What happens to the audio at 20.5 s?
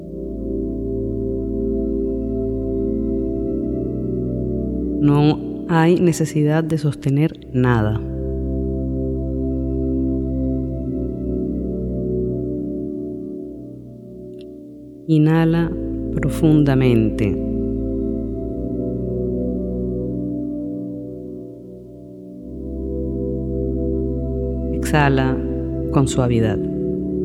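Nothing goes wrong at 20.5 s: the audio plays through that moment intact, with no dropout, click, distortion or other fault to be heard.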